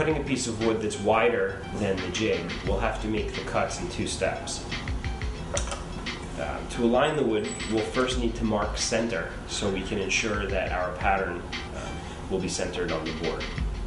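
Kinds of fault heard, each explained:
No faults can be heard in this recording.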